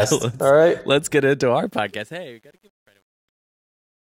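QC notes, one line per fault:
1.66 to 4.15 s, truncation distortion on a fade: after "let's get into our" the fade-out turns gritty, worst from 2.22 s, which fits an undithered gain stage at about 10 bits.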